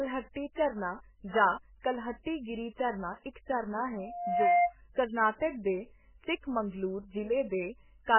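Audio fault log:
throughout, MP3 compression: likely a heavily starved MP3 encoder, fitting a bitrate near 8 kbps, that drops weak frequency lines and cuts everything above 3 kHz, so the speech sounds watery, swirly and dull.
1.80–1.84, 2.23–2.26, 3.33–3.36, 4.93–4.96, pre-echo: quantisation noise spread across a transform block fills the quiet 23 to 38 ms before attacks, the first just after "ਝਰਨਾ ਜਾਂ", giving a brief hiss and softened onsets.
3.96–4.74, loudspeaker feedback squeal: the microphone picks up its own loudspeaker, and loop gain above one at 704 Hz lets that tone swell over about half a second to roughly 10 dB above the speech.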